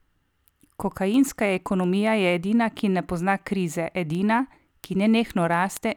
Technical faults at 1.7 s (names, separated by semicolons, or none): sample clock jitter; word clock ticks